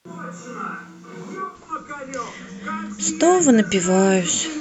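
From the very start until 1.54 s, the speech sounds like a switch to a distant microphone: roomy and hollow, thin in the bass, with background noise sitting well below the speech. At 1.54 s the sound snaps abruptly to a close, full tone. The likely cause is that the close microphone's signal was missing and a farther one stood in. Loudness barely changes at the switch, so the sudden swap in room sound and bass, rather than a drop in level or gradual reverb, marks it.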